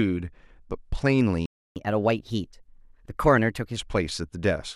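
At 1.46 s the player most likely ran short of data or was blocked, causing a playback stall: the speech cuts to silence for about 300 ms until 1.76 s. The player then works through its backlog with catch-up at higher speed, resampling at 1.15x, so from 1.76 s to 3.76 s the speech runs faster and about two semitones higher.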